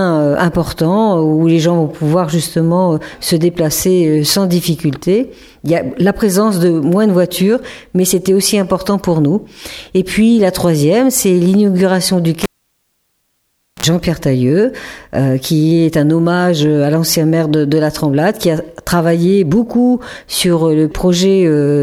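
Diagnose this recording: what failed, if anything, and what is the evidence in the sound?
The failure is in the analogue wiring: a cable pulled and plugged in. A pop at 12.43 s starts about 1.38 s of near silence. A 60 Hz mains buzz lasting about 0.06 s follows as the plug's tip touches first. A second pop at 13.86 s restores the sound.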